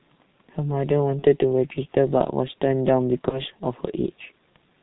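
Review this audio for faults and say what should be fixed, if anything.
Throughout, the speech has the muffled, hoarse sound of the G.723.1 codec at about 6.3 kbit/s: nothing above 4 kHz and blurred consonants. A plain low-pass filter would remove the same highs without that hoarse grain. Switching to a higher-rate wideband codec would prevent it.

At 1.19–1.24 s and 3.29–3.41 s there is VoIP packet loss concealed by the speech codec. Each event fits a single lost 30 ms frame that the decoder stretched into a fading buzzy tone or coloured noise, rather than a silent gap or click. Forward error correction or a deeper jitter buffer would prevent it.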